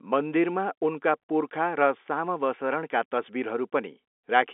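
No faults heard in the speech; the telephone-band path sounds as expected, with the band running from about 250 Hz up to about 3.5 kHz.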